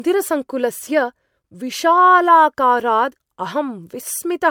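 From start to finish the speech carries generation loss, most likely from repeated lossy encoding, consistent with MP3 at around 96 kbit/s applied about three times over. Each new pass requantised on a shifted frame grid, so the artefacts stacked: the sound is swirly, hollow and smeared, with softened consonant attacks. A spectrogram would show nothing above 19.9 kHz, plus patchy holes and blotchy, time-smeared texture across the upper bands.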